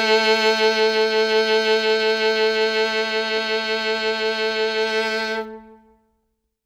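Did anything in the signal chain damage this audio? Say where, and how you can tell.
No, nothing in this music points to damage at any stage of the chain.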